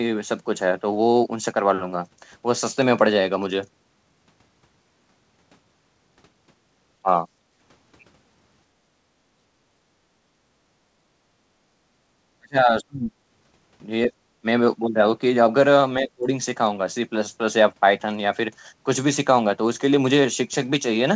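At 7.02 s the speech drops by roughly 20 dB for about 70 ms, most likely speech suppressed in double talk. With both ends talking at once, the echo canceller could not separate the near talker from the loudspeaker echo and turned the microphone down. On the waveform this shows as a sudden pinch in the envelope. On the spectrogram there is a thin vertical gap where the harmonics briefly fade.

From 7.39 to 7.51 s the background is gated by the echo canceller. The room tone sinks by about 10 dB while the loudspeaker plays, then returns. The same thing happens from 8.73 to 9.68 s (about 12 dB, roughly 0.7 s in total), from 10.21 to 10.39 s (about 13 dB) and from 11.21 to 11.27 s (about 11 dB). The noise floor dips and comes back each time. This looks like darker horizontal stretches in the low-level spectrogram haze and a flattened floor on the waveform.

Deeper suppression, likely from double talk, follows from 12.39 to 13.13 s, where the speech falls roughly 35 dB over about half a second. 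It happens again from 16.02 to 16.28 s, falling roughly 30 dB over about 200 ms. In both places the spectrogram shows blank patches cut into the harmonic bands. Throughout the clip nothing sits above 8 kHz, which fits a 64 kbps G.722 call path.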